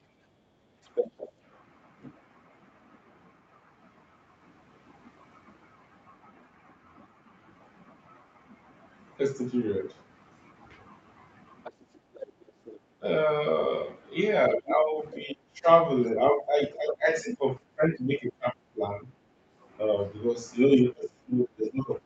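From 0.09 to 0.7 s the background is gated by the echo canceller: while the loudspeaker plays, the canceller clamps the microphone, and the room tone sinks by about 12 dB for roughly half a second. On a waveform the noise floor visibly narrows; a spectrogram shows the faint broadband haze thinning, then returning.

Between 0.84 and 1.32 s the other side's voice leaks through, only a few dB below the main speech, so the echo canceller has likely left residual loudspeaker sound in the microphone. A spectrogram shows a second set of harmonic striations overlapping the first, slightly ragged.

A longer, quieter leak runs from 11.64 to 16.21 s, around 15 dB under the talker. It appears as faint, broken harmonic traces beneath the main speech.

Inside that leak, from 11.99 to 12.63 s, the background gating returns, dipping about 9 dB for roughly a third of a second. It shows as a brief trough in the noise floor.

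From 13.0 s to the end at 22.05 s, speech is suppressed in double talk. With both sides active, the canceller likely could not separate its own talker from the echo and turned everything down, so the voice dips by up to around 20 dB, dulls and breaks into pieces. A waveform shows the envelope repeatedly collapsing mid-phrase, and a spectrogram shows the upper harmonics fading out in patches, well below the codec's 8 kHz ceiling.

At 19.34 to 19.59 s the background is gated once more, a short dip of about 9 dB visible as a narrow notch in the noise floor.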